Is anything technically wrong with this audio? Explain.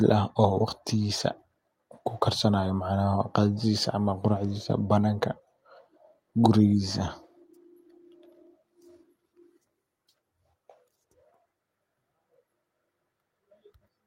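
No, nothing technical stands out in this speech recording, so there's nothing here to flag.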